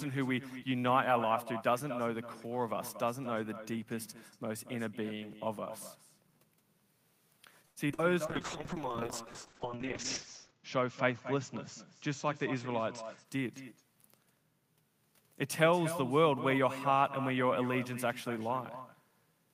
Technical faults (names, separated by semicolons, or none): echo with no canceller; repeated packet loss (robotic sound); call bitrate drop; jitter buffer speed-up